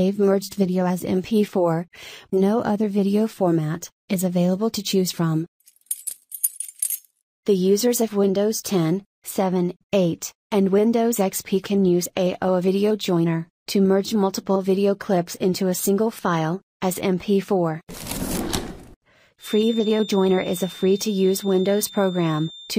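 From 19.37 s to the end, a feedback whistle appears. A thin 3.6 kHz tone sits well below the sound. It likely comes from a speaker-to-microphone loop hovering at the feedback point.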